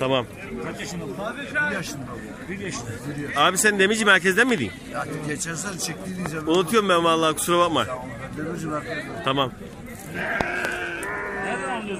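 Loud pops land at 4.49–4.60 s (a double), 6.26–6.28 s and 10.41–10.67 s (another double), roughly 15–20 dB above the audio, likely from voltage spikes. Unlike dropouts, the sound carries on underneath.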